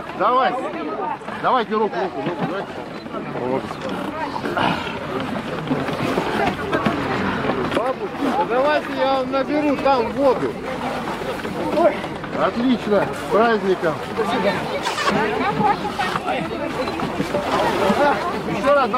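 From 14.83 to 15.10 s, the audio is read two samples at a time (double speed). The reader takes each pair of samples as a single frame, as though the stream held two channels or samples twice as wide, so it consumes data twice as fast as intended. For those 0.27 s the sound runs at 2.0 times speed and jumps an octave higher.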